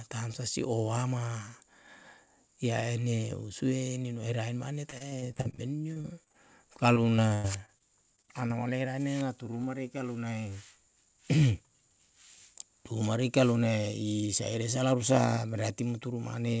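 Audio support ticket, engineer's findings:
Repeated packet loss (robotic sound), 4.90–6.36 s, right after "usue nino herae mane": choppy speech with 14 short holes (longest 37 ms), about a fifth of the span patched by extending prior audio. Probable component: network/jitter buffer feeding concealment.

Repeated packet loss, 6.74–8.52 s, ending before "ole rane na turu": 10 holes, one about 98 ms, 16% concealed. Same loss-and-repeat mechanism. The call path cuts everything above 8 kHz, consistent with a G.722 wideband codec.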